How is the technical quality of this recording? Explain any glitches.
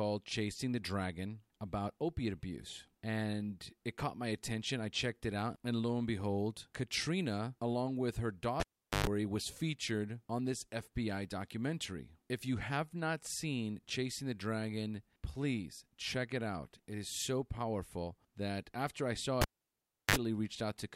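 The recording has two cable glitches, both a cable pulled and plugged in while live. The first runs from 8.60 to 9.07 s and the second from 19.42 to 20.16 s. Each starts with a pop as the contact breaks, then the speech drops to near silence, for about 0.42 s the first time and 0.69 s the second. While the plug tip rides back in before it seats, there's a short 50 Hz mains buzz, about 0.12 s and then 0.05 s, and a second pop as the speech comes back.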